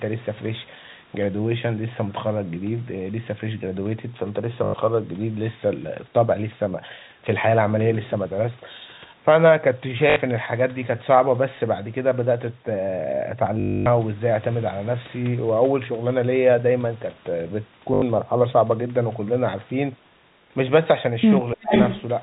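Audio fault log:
4.64–4.74, 10.10–10.16, 13.60–13.86 and 17.94–18.02 s: packet loss with last packet repeated. Gaps of 100, 60, 260 and 80 ms are filled by replaying the last chunk of audio, which fits 20 ms packets. The 260 ms run at 13.60 s becomes a robotic stutter buzzing near 50 Hz. On a waveform, identical 20 ms segments repeat. On a spectrogram, a flat, comb-like harmonic band at 50 Hz spacing appears.
21.54–21.71 s: speech suppressed in double talk. The level dips sharply, about 30 dB at its deepest, across roughly 150 ms. The likely cause is an echo canceller that cannot tell the near talker from loudspeaker echo while both sides speak at once, so it turns everything down. On the waveform, the envelope dips. On the spectrogram, energy drops, within a band already capped at 4 kHz by the telephone coding.
21.70–22.02 s: echo leak. A delayed copy of the voice returns about 0.36 s after the original, roughly as loud as the direct speech, so it sounds like a second voice trailing the first. 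The likely cause is an echo canceller at a loudspeaker end letting part of its microphone pickup through and sending it back. On the spectrogram, the harmonic pattern repeats shifted 357 ms later. On the waveform, the envelope doubles.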